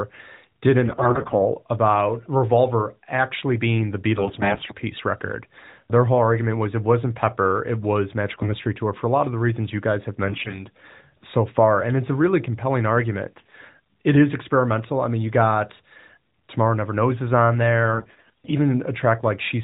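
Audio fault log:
0.86–1.41 s, 4.18–4.75 s, 8.30–8.55 s, 10.24–10.66 s, 13.38–13.54 s, 17.94–18.53 s: AMR bit errors. Speech turns hoarse and gargly while pitch and level hold. Roughly a tenth or more of the weakly protected bits in the 4 kHz-limited stream arrive flipped, misplacing excitation pulses and skewing fine gain and spectral values.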